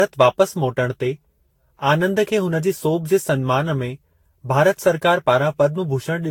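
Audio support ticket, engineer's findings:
Generation loss, whole clip. Swirly, hollow, smeared speech with blurred attacks, worse than one encode near 70 kbit/s would give. Likely repeated lossy re-encoding, around ten passes. Spectrogram: holes accumulating across bands, nothing above 19.3 kHz, transients smeared in time.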